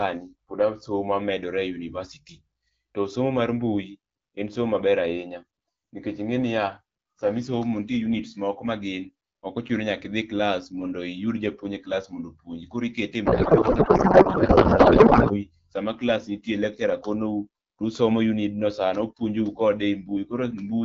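From 13.25 to 15.48 s a codec payload misread replaces the speech with garbled noise and warble that barely tracks it. The AMR frames were packed octet-aligned but decoded as bandwidth-efficient, so every field lands in the wrong place, until the formats match again.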